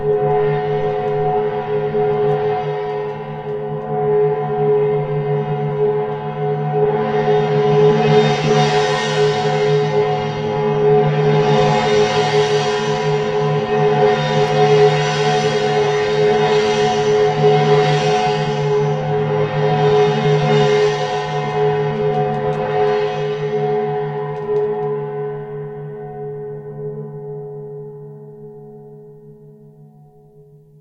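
No technical faults can be heard anywhere in the recording; the signal stays intact and continuous throughout.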